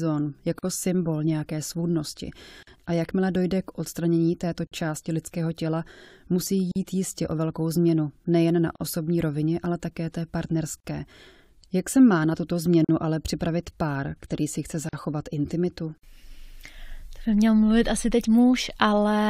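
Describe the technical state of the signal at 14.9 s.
Two separately encoded pieces were joined at 14.89 s without trimming the encoder's start delay and last-frame padding, causing a gap at a join of encoded pieces. Speech cuts into about 43 ms of silence until 14.93 s, with smeared edges, then resumes where it stopped.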